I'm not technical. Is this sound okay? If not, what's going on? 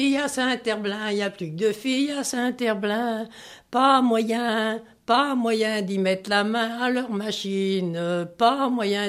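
Yes, nothing here sounds wrong; it's fine as is.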